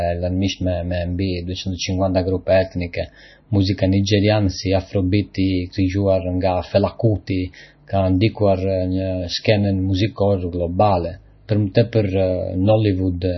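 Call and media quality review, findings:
Speech dull and watery throughout, no content above 5.9 kHz, swirly warbling on sibilants, smeared onsets. Likely MP3 compression: starved encoder cuts treble at a fixed limit and toggles weak frequency lines frame to frame. Heavy damage points to a bitrate near 26 kbps.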